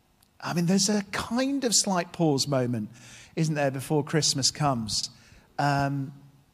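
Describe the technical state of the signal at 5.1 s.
Around 5.1 s the speech shows an overlapping-chunks fault, spanning roughly 5.03 to 5.08 s. The processing works in blocks of about 2.0 s, and the next block begins before the previous one has finished, so about 48 ms of sound is played twice at the join. The result is a brief click or stutter at the seam. What sets it apart from a dropout is that nothing is missing: the audio is duplicated rather than lost.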